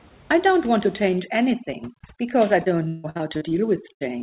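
From 1.16 s to the end of the clip, overdone noise removal is at work. The suppressor cuts individual frequency bands hard wherever they sit close to its noise estimate, so the room noise, about 26 dB below the speech, collapses into near silence with twinkling specks, and the quieter parts of the speech go too.

Between 2.64 s and 3.53 s, repeated packet loss gives a robotic sound. Six dropouts in quick succession are patched by extending the preceding audio, covering about 35% of that stretch, with the longest gap around 159 ms. The result is choppy, with pieces of the speech missing.

At 3.93 s, a burst of packet loss removes about 80 ms. The receiver holds the last sound and fades it across the gap, which is heard as a brief buzz or hiss before the audio resumes with that piece gone. Throughout, the band stops at 4 kHz, which fits a G.711 call codec.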